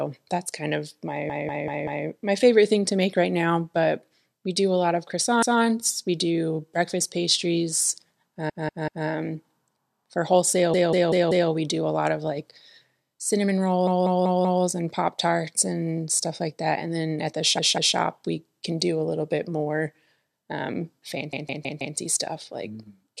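Repeated frames: a short run of compressed frames was delivered more than once, so the decoder replays the same slice of speech. Stutters begin at 1.30, 5.42, 8.50, 10.74, 13.87, 17.58 and 21.33 s. Each loops a 192 ms block (160 ms at 21.33 s) one to four extra times, and stretches the audio by up to 0.77 s.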